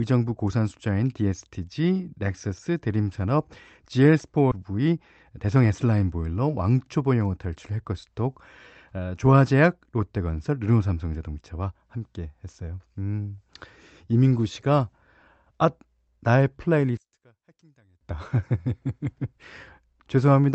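At about 4.51 s there's a skip ahead: roughly three quarters of a second of audio just isn't there, and playback jumps forward with no gap fill, so the two sides butt straight together and the sound lurches abruptly.

Right after, the jitter buffer speed-up kicks in twice, from 4.71 to 4.93 s at 113% and from 5.37 to 6.16 s at 111%. The receiver is trimming short pitch-period chunks to pull latency back down, shaving off a few tens of milliseconds and then about a tenth of a second. The speech sounds hurried while the pitch stays put.

From 16.97 to 18.01 s the level drops by about 32 dB when heard in mono, leaving only a faint residue of the speech. That's the one channel inverted pattern: one stereo side likely had its polarity flipped, so the centred content cancels when the two sides are summed. The call path's Opus coding with its roughly 8 kHz top end runs throughout.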